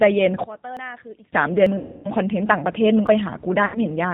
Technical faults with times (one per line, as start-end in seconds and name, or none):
0.00-4.13 G.729 codec
0.44-1.33 one channel inverted
0.77 dropped buffer (overrun)
1.66 dropped buffer (overrun)
1.78-2.09 VoIP packet loss concealed by the speech codec
3.07 dropped buffer (overrun)
3.65-3.79 VoIP packet loss concealed by the speech codec